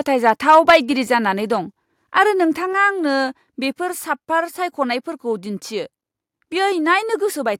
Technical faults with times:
0.28-0.76 microphone overload
0.70 microphone volume stepped down

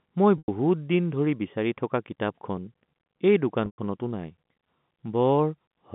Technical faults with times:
0.38-0.48 packet loss with pitch repetition
3.66-3.78 packet loss with pitch repetition

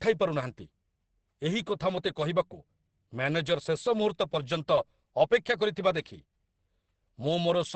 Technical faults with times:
0.00-7.75 Opus compression

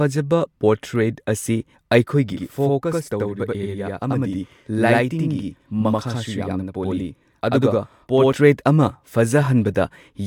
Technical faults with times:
2.33-8.33 channel delay (doubling)

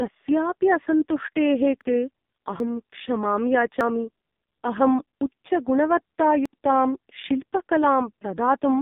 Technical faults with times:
0.00-8.82 AMR narrowband mobile codec
1.81 dropped buffer (overrun)
2.60 dropped buffer (overrun)
3.81 dropped buffer (overrun)
6.46 dropped buffer (overrun)

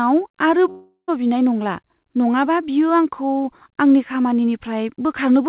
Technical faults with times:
0.70-1.10 long network dropout

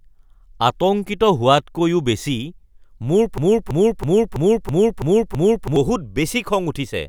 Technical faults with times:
3.38-5.76 broken-record loop

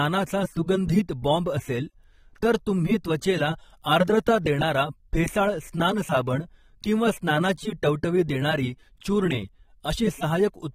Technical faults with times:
0.00-10.74 AAC compression

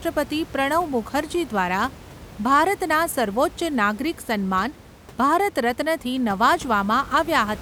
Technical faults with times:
none

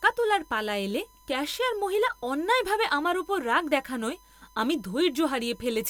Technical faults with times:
0.00-5.90 USB whine

